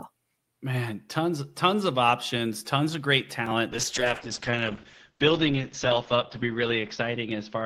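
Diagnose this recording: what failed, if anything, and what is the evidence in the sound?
The call's bandwidth estimate collapsed at 3.73 s, so the call's rate control told the codec to spend far fewer bits. The result is a call bitrate drop that lasts to the end of the recording. From that point the speech turns coarse and watery, and its top end falls from about 20 kHz to 8 kHz. That pattern fits a fall from about 40 kbps to 8 kbps, held at its lowest for about 2.75 s.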